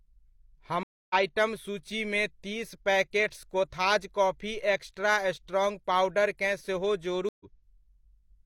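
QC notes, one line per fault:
0.83–1.14 s, stream reconnect: the speech drops to about 0.27 s of silence, then resumes on "आइटम सूचीमे तीस पैकेट्स" roughly 0.3 s further into the stream. The connection broke, the player reconnected and started a new decoder mid-stream, so the missing stretch of the live feed is skipped.
7.29–7.46 s, stream reconnect: right after "पाउडरकेँ सेहो" there is a silent gap of about 0.12 s, and playback rejoins roughly 0.15 s later. The mechanism is the same: a break, a reconnect and a fresh decoder start.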